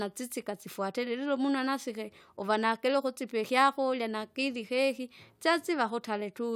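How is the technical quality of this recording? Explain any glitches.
No dropouts, clicks, distortion or other glitches are audible anywhere in this speech recording.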